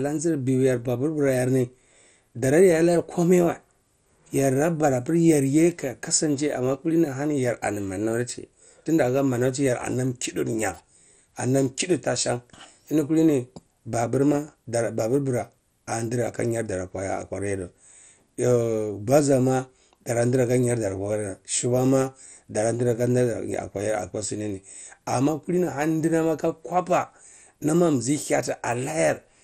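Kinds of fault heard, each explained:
MP2 compression: Across the whole speech clip the top end sounds thin and unsteady, nothing survives above 15.8 kHz, and a gurgling, granular roughness clings to the speech. This likely comes from MPEG Layer II coding at a rate that fits about 64 kbps. With too few bits, the coder switches whole sub-bands off and on and quantises the remaining ones coarsely. A plain low-pass filter would dull the top steadily without this grainy, flickering texture.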